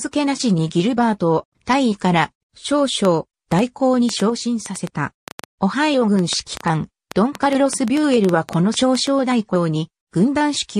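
From 3.05 s to 9.08 s a train of clicks ticks over the sound at about five per second, unevenly spaced, some thirty in all and around 10 dB above the surrounding level, audible through the quieter moments too. Likely cause: interference from nearby equipment or a faulty connection or power supply, repeatedly injecting near-identical pulses.

At 4.30 s the level abruptly falls by about 5 dB, sound and background noise together, and stays down until 4.83 s. This sudden gain jump likely comes from a digital gain setting being applied between one sample and the next without any ramp.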